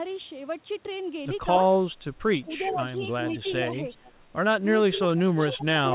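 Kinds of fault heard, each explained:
Speech suppressed in double talk: The speech level sinks in patches from 2.46 to 3.69 s and again from 4.9 s to the end, dipping by around 10 dB in the first stretch and by nearer 20 dB in the second. Short parts of the first stretch, about a third of a second in all, are affected. The likely cause is an echo canceller turning everything down while both sides talk at once.
Echo leak: A delayed copy of the speech trails the original by about 0.43 s. It appears first as a brief scrap at 2.63 s, then as a longer tail from 3.33 to 4.12 s, and is strongest from 4.95 s to the end, rising from barely audible to only moderately below the speech. It is likely loudspeaker pickup the canceller failed to remove. Its fixed, distinct delay sets it apart from room reverberation, which smears continuously rather than repeating.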